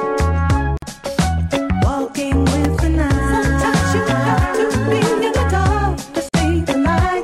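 At 0.77 s the sound drops out for about 50 ms, and again at 6.29 s for about 48 ms. Each is a gap at a join of encoded pieces: separately encoded segments were butted together untrimmed, so the encoder's start-up delay and end-of-stream padding survive as silence. It sounds like a brief stutter before continuing. On a waveform, a flat strip with smeared edges; on a spectrogram, a narrow vertical blank band with slightly smeared borders.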